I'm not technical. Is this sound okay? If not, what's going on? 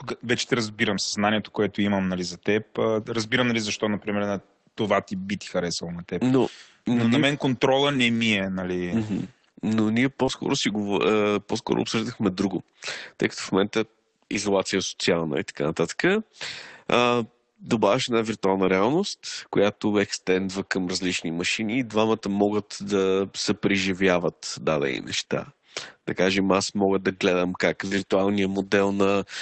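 No, there are three kinds of fault in this speech recording.

Lost packet rebuilt from error correction, from 7.91 to 8.25 s, and again briefly at 10.28 s and 18.64 s. Pieces of the call were lost on the way, but the next piece carried a cheap backup copy of each missing one. The receiver played those backups, so nothing goes silent. The first stretch lasts about a fifth of a second, which fits nine pieces being lost, and it sounds rougher and noisier than the audio around it.

Short concealed packet loss, from 10.25 to 10.30 s. About two hundredths of a second arrived too late to play. The receiver guessed, carrying on the last bit of sound and then blending back into the real audio. It is a tiny hiccup, heard as a brief smear or wobble, and it runs straight into the small backup patch at 10.28 s.

Scattered short gaps, from 22.16 to 27.97 s. Here roughly three small pieces went missing, one at a time, spread across those six seconds. 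The longest was about four hundredths of a second. Each was patched the same way, by stretching the sound just before it, so the speech stays clear but has a few quick ticks or stumbles. Together they cover only around one percent of that stretch.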